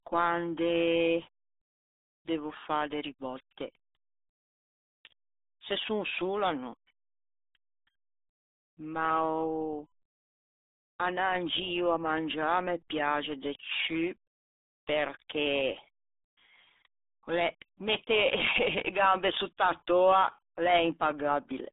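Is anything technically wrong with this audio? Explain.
Yes. The RealAudio 14.4 codec shapes the entire clip. This early dial-up speech codec models the voice with very few bits per frame, and the heavy damage here fits a stream of about 8 kbit/s. The speech sits in a telephone-like band from about 200 Hz to 3.7 kHz, with nothing at all above 3.8 kHz. As a result it sounds muffled and boxy, with a gargly, bubbling roughness on every syllable.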